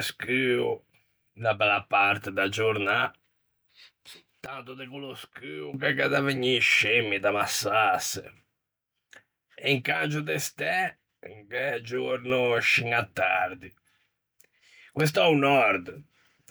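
At 4.46 s the speech and its background noise drop together by about 16 dB until 5.74 s, just before "che gh'é da vegnî"; at 9.92 s they fall about 6 dB until 12.3 s, before "scin à tardi". Each sudden gain jump likely comes from an unramped digital gain change.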